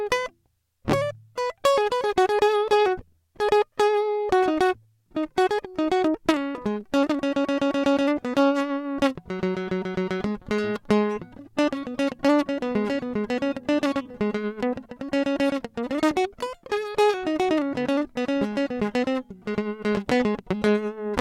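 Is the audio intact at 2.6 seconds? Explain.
Yes, the music plays through cleanly at 2.6 seconds, with no dropout, click, distortion or other fault at that moment.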